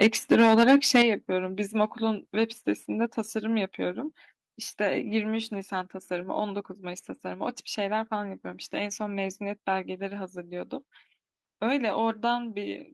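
From 0.01 s to 1.02 s the speech has a hard, crackling edge on its loudest syllables, with about 7 percent of samples flattened at the converter's limit and peaks pushed about 7 dB past the limit. This is microphone overload, likely from input volume set too high, so the converter squares off each waveform top. Unlike codec distortion, the harshness rises and falls with loudness and disappears on quieter sounds.

At 0.03 s and again at 1.02 s, voice and background drop together in a single step, first by about 2 dB, then by about 6 dB. This is the microphone volume being stepped down, likely by call software reacting to the clipping. The second, larger cut arrives exactly as the overload ends. A fade or noise gate would not behave this way. The level jumps instantly and then holds steady, with the room tone shifting by the same amount as the speech.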